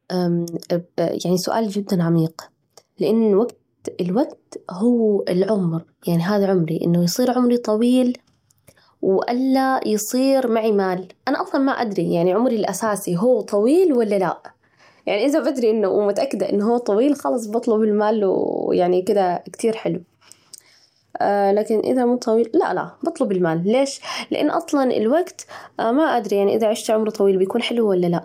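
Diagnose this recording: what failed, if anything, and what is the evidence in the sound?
Nothing failed at any stage of this speech recording; the signal reaches playback intact, with no audible defect from capture through to output.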